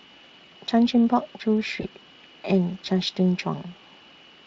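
A short speech recording carries VoIP packet loss concealed by the speech codec at about 1.81 to 1.85 s. The sound is briefly smeared into a buzzy tone or coloured noise that fades, and stays weak just after. The missing stretch is 20 ms, which fits a single lost frame. Unlike a plain dropout, it leaves no silent gap or click, because the decoder extrapolates the previous sound. The speech is also lightly coded with Speex at 23.8 kbps.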